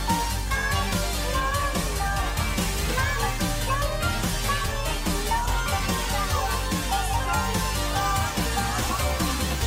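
No technical faults are audible anywhere in the audio.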